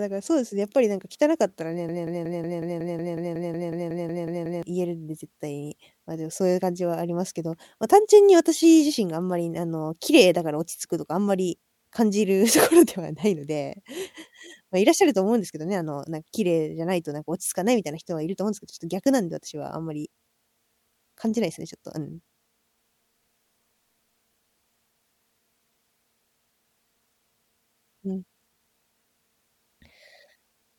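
From 1.89 to 4.63 s, a 0.18 s fragment repeats 15 times back to back, a broken-record loop, likely from a stalled player or stream replaying its last buffer.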